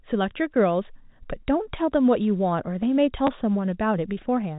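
Speech over a G.711 telephone path shows packet loss with the last packet repeated at 3.27 s: about 10 ms, which points to one lost packet, is refilled by replaying the previous chunk. Unlike a dropout, there is no silent gap, only a small blip where the repeat joins.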